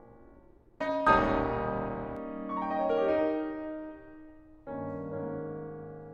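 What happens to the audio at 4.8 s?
Nothing goes wrong at 4.8 s: the music plays through that moment intact, with no dropout, click or distortion.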